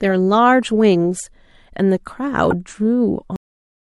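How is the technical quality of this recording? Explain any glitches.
The speech has two technical faults. At 2.51 s there is damaged data in the compressed stream. The decoder misreads the corrupted frames, loses sync and hunts for the next header, causing a brief chirp, squawk, click or short hole. At 3.36 s the clip has a cut-off end. The final buffers were never written, so the speech stops mid-sound and drops straight into digital silence, with no natural decay.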